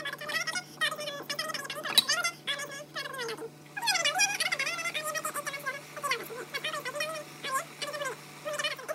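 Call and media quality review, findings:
Wrong sample rate, throughout. Sound runs three times fast, pitch up 19 semitones; fits 16 kHz audio played at 48 kHz unconverted. Probable component: playback path. Pitch and tempo rise together, unlike a pitch shifter or time-stretch.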